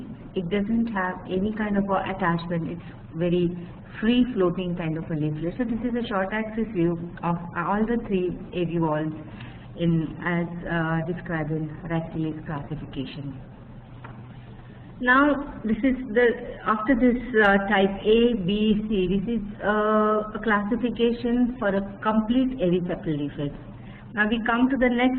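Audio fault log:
0.0–2.0 s, adaptive stream starting at a low bitrate: the opening two seconds come from a low-bitrate version of the stream, chosen so playback could begin quickly before the connection was measured. The treble is missing or synthetic and codec artefacts are stronger, which fits Opus at around 16 kbit/s. At 2.0 s the player moves to a better version, consistent with about 64 kbit/s, and the quality improves suddenly with no gap in the audio.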